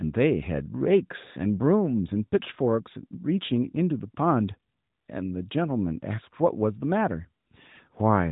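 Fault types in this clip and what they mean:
No technical faults are present.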